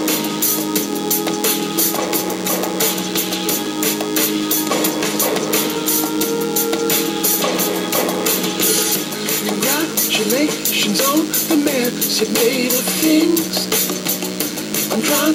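Throughout, a DECT cordless phone buzz sits roughly 15 dB below the sound: a thin, steady 100 Hz buzz, rich in harmonics, from rectified radio bursts every 10 ms.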